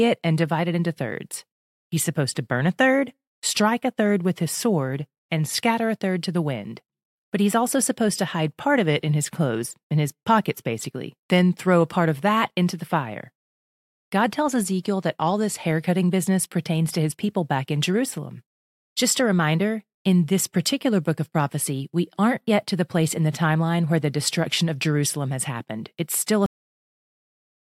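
A cut-off end hits this speech clip at 26.46 s, where the audio stops dead in the middle of a sound and falls straight to digital silence for the remaining 1.16 s, with no natural decay or room tail. The last buffers of audio were never written out or played, so whatever was being said is truncated abruptly rather than fading, leaving the recording ending on a hard edge.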